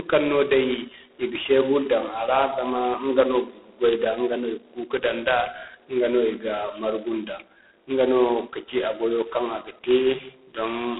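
Speech passed through G.726 ADPCM at what sounds like 16 kbit/s throughout: a harsh, rasping hiss tracks the level, with the band held to roughly 250 Hz to 3.5 kHz and nothing above 3.8 kHz.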